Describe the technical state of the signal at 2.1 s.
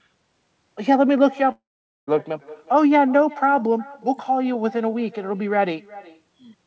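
At 2.10 s the audio is just returning from a gap that began at 1.52 s. The last sound was stretched into a fading buzz, then went silent for roughly 0.45 s. This is likely a long network dropout. About 0.56 s of audio never arrived, and the sound resumes past that lost portion.

The echo with no canceller also runs through this moment. A thin copy of the speech trails it by around 400 ms, about 22 dB quieter. It is the far end's loudspeaker leaking into its microphone and coming back uncancelled.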